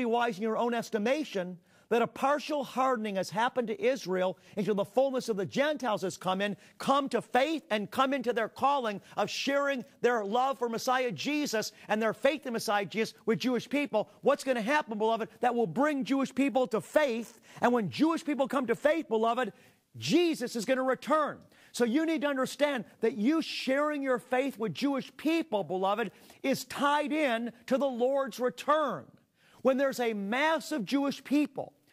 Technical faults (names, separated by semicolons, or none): none